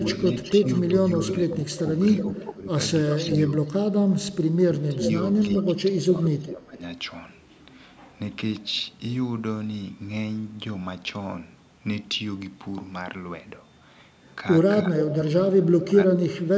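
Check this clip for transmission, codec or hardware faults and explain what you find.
Two faults recur through this speech clip, both tied to a speakerphone echo canceller: echo leak and speech suppressed in double talk.

Echo leak appears at 0.08–2.42 s, 3.09–4.14 s, 4.97–6.0 s and 15.03–15.85 s. The likely cause is a loudspeaker on one side whose echo canceller left part of the microphone pickup in place and sent it back. A delayed copy of the speech trails the original by 364, 371, 376 and 405 ms. It sits about 10 dB below the speech in the first two stretches, about 5 dB below in the third and about 15 dB below in the last.

Speech suppressed in double talk occurs at 0.5–3.18 s, 4.46–5.07 s, 5.66–6.8 s and from 14.84 s to the end. Both sides were talking at once, and the canceller, likely unable to tell the local talker from the returning echo, turned both down. The speech dips in pieces. 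The drops reach about 10, 25, 15 and 20 dB, covering under a second, about half a second, about a second and about a second of each span.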